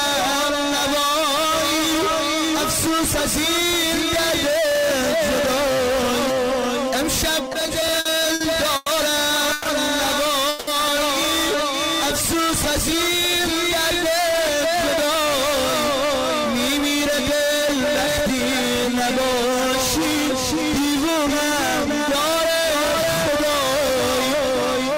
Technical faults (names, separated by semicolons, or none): repeated stalls (stutter); call audio freeze; jitter buffer speed-up